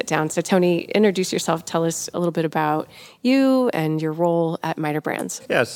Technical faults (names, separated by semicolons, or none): none